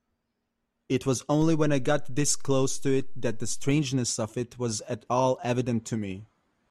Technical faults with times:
1.42-3.71 DC step

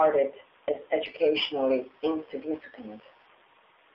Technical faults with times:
0.00-3.95 AMR narrowband mobile codec
0.74-0.77 lost AMR speech frames

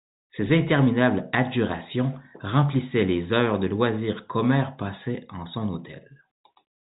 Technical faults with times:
none

